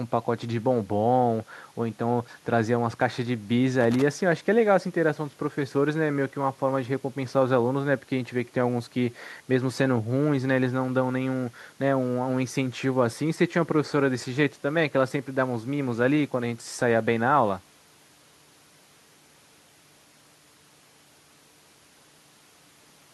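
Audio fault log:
3.81 to 4.02 s, loose connector crackle: a worn contact makes and breaks rapidly for about 0.2 s, chopping the speech into a brief irregular burst of scratchy crackle.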